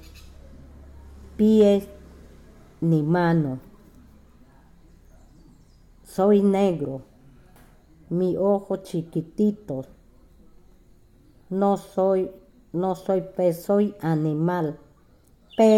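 Hard clipping occurs twice, briefly, in a short piece of audio: from 1.60 to 1.67 s, with the signal overdriving the stage by about 1 dB, and from 15.60 to 15.75 s near the very end, at about 2 dB. Each time, the peaks exceed what a converter or gain stage can pass and are sheared flat. The flattened tops generate high-order harmonics, heard as a short crackle on the loudest moments.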